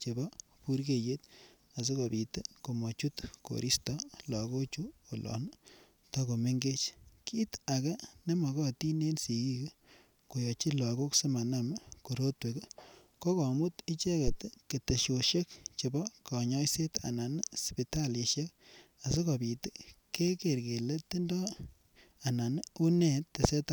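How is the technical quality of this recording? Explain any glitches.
The recording has one glitch: a deep thump at 14.27 s, ending by 14.37 s. It is a phantom power thump, peaking at about -20 dBFS and dying away in roughly 21 ms. It occurs when supply voltage is switched on a live input, and the sudden step passes through the coupling capacitors into the speech path as a low-frequency pulse.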